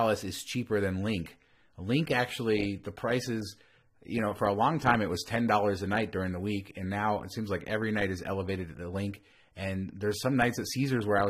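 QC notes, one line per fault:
1.00–11.30 s, adaptive stream at a lower bitrate: right after "is cheaper" the quality drops suddenly with no gap and codec artefacts rise through to the end. That fits the stream switching from roughly 96 kbit/s AAC-LC to a 24 kbit/s version as the connection slowed.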